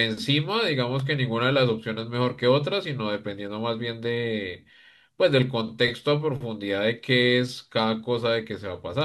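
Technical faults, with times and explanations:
0.99 s, electrical switching spike: a sharp snap or tight cluster of clicks of a few milliseconds sits on top of the speech, peaking around -25 dBFS, likely a nearby switch or discharge arcing onto the line. Unlike a dropout or glitch, nothing is removed; the snap is added over the sound.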